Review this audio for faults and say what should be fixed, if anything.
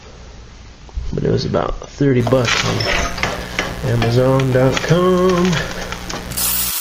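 Mains buzz from 2.2 s to 6.71 s: sharp switching spikes, arriving twice per 60 Hz cycle, leak into the audio and stack harmonics of 60 Hz up into the kilohertz range, giving a steady, raspy buzz sitting only around 15 dB under the sound. To prevent it, keep dimmers and rectifying supplies off the recording circuit and use properly shielded, grounded cabling.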